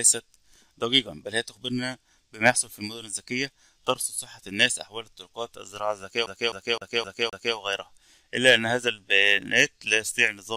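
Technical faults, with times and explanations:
6.26–7.56 s, CD stuck on one turn: the same 0.26 s snippet stutters five times with brief mutes, as a scratch keeps throwing the laser back one track.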